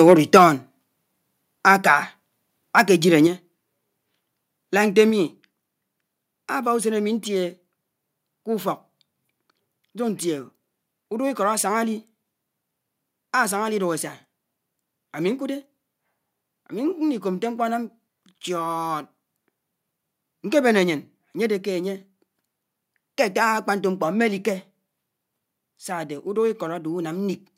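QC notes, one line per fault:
0.07–0.44 s, 1.67–1.71 s and 2.78–2.81 s, microphone overload: the loudest peaks turn harsh and crackly, with flattened tops on roughly one or two percent of samples and peaks pushing about 2 to 3 dB past the converter's limit. The likely cause is an input level set too high for the converter. Unlike a gain step, the level doesn't change afterwards. The distortion sits on the peaks themselves.
0.37 s, 3.27 s and 5.1 s, microphone volume stepped down: the voice and the background drop together in a single abrupt step, by about 4 dB at the first two points and about 2 dB at the third, and stay lower afterwards. This is likely the call software cutting the device's input volume in response to loud or clipped input. The first step lands inside the opening overload. Unlike clipping, it adds no crackle, only a sudden and lasting loss of level.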